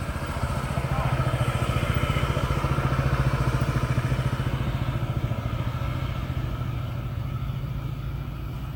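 Throughout the clip the sound has a swirly, hollow smear, transients are softened, and nothing is present above 17 kHz. This is generation loss, likely from about three successive AAC-LC passes near 96 kbit/s, each requantising on a shifted frame grid and compounding noise and spectral holes.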